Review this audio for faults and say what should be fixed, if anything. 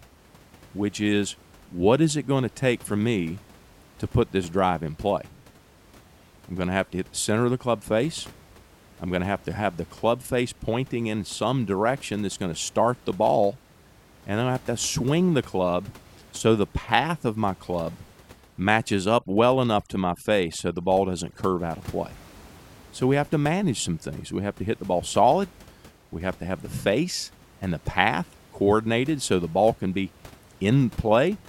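Overdone noise removal from 19.05 to 21.59 s, between "of my club matches" and "out of play": an over-aggressive noise reducer gates individual frequency bands near its noise estimate, dropping quiet speech detail. The background drops and breaks up into twinkling specks, and a spectrogram would show scattered isolated bright dots in place of a continuous noise floor. The room noise, about 26 dB below the speech elsewhere, is part of the recording rather than a fault. Prevent it by lowering the reduction amount so the noise is attenuated rather than removed.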